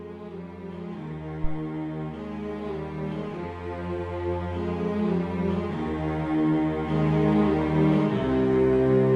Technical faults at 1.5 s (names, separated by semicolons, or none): phantom power thump